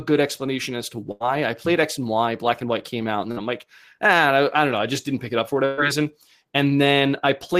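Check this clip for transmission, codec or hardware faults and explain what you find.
The clip has three bursts of packet loss. They fall at 1.11 to 1.27 s between "good explanation as to" and "I played", at 3.31 to 3.43 s between "came out and" and "I'm like ah", and at 5.65 to 5.80 s just after "pick it up for". Each time, a run of packets never arrived in time, so the receiver stretched the last sound it had and faded it down. About 90, 50 and 120 ms were filled this way, and the speech then picks up later, skipping about 80, 40 and 120 ms.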